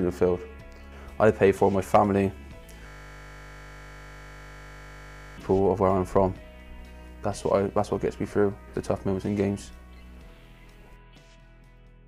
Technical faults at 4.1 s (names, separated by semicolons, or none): system hang loop